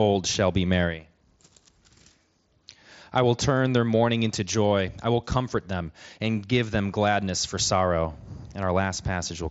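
The speech clip has no technical faults. It carries the character of a Bluetooth mSBC headset codec working normally, with nothing above about 7.7 kHz and only light codec texture on the sound.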